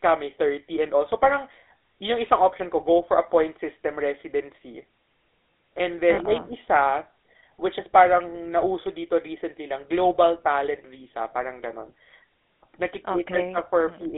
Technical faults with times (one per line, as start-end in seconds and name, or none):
0.00-14.17 GSM full-rate codec
6.14-6.19 lost GSM frames